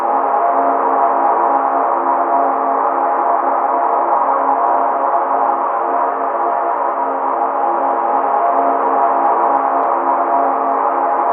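A recording of everyday sounds, with no technical fault anywhere in it. There is nothing that needs a time or a cause attached.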